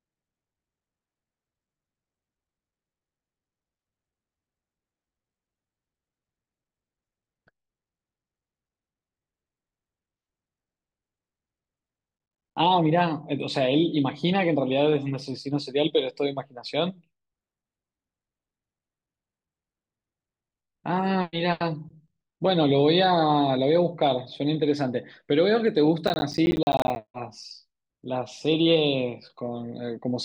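From 26.07 to 27.08 s the speech breaks into processor overload crackle. For about a second the system keeps missing its deadlines for audio buffers of around 10 ms each, and each missed buffer comes out as a hard-edged slice of silence. Some thirty of these gaps cluster together into a gritty, tearing crackle laid over the speech. A single dropout would be one clean hole. This is a dense run of tiny cuts that stops abruptly once the load eases.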